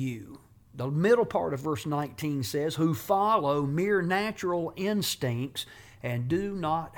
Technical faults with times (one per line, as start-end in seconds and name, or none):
none